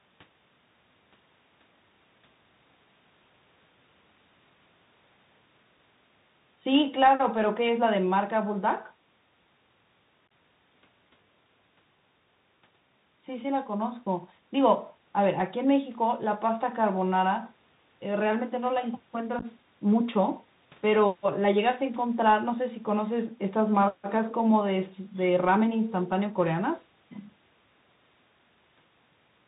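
Speech runs the whole clip in a dull, telephone-band sound with nothing above 4 kHz, scratchy s sounds and a granular hiss beneath it. This is the Bluetooth CVSD headset codec, whose one-bit up-or-down steps cannot keep pace with loud, high-frequency detail. At 10.28–10.31 s and 19.39–19.45 s the sound breaks into brief holes with abrupt edges, about 30 ms lost across 37.5 ms and 22.5 ms across 30 ms. This is unconcealed Bluetooth headset packet loss, where several short voice packets vanished and were left as gaps.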